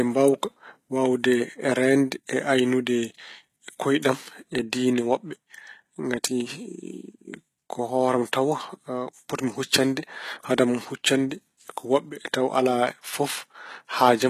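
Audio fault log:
throughout: likely HE-AAC compression. The top end is rebuilt from copied lower bands, so its harmonics fail to line up with the real ones below. The damage is plainly audible. Nothing sounds above 14.9 kHz. This fits a low bitrate near 20 kbps.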